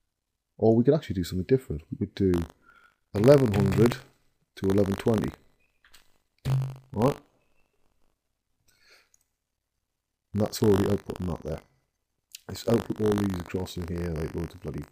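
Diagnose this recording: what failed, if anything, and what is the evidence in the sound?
Buffer tearing from 2.32 s to the end, at the driver or buffer stage: a steady 50 Hz robotic buzz rides on the sound, which fits a 20 ms period. Writer and hardware pointers have slipped, so a small slice of each buffer replays audio from roughly 70 ms earlier between hard joins.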